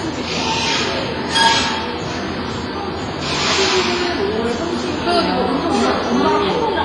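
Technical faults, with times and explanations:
Throughout, WMA compression: heavy washy ringing and a hiss that breathes with the signal, with nothing above 10.6 kHz, point to a likely WMA encode near 24 kbps. Unlike a plain low-pass filter, the noise smears across long transform blocks lasting tens of milliseconds.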